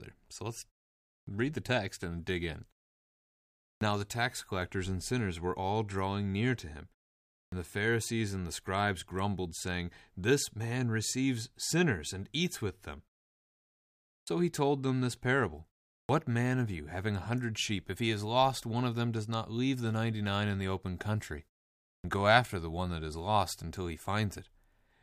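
Speech, with a clipped start after a pause six times: at 1.21, 3.76, 7.47, 14.21, 16.03 and 21.98 s, roughly 53 to 63 ms vanishes after gaps of 0.4 to 1.2 s, so words pop in missing their openings. The output device is dozing in the silences and waking late.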